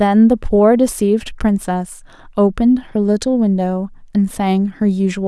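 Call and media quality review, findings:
No audible faults found.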